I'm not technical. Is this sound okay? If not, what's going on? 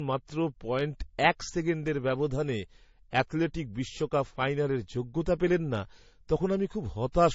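No. Across the whole recording the speech sounds dull. Nothing above about 7.6 kHz is present, which removes the crispness. This is most likely transcoding between lossy codecs: the audio was squeezed by one compression format, such as MP3, then squeezed again by another, such as AAC. The second pass wasted effort on the first pass's damage, added flaws of its own, and both sets are audible together.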